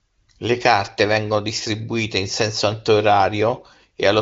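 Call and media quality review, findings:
No faults found: the speech carries wideband HD Voice character with content stopping near 7.6 kHz, consistent with a higher-rate AMR wideband mode, and any coding roughness is faint at most.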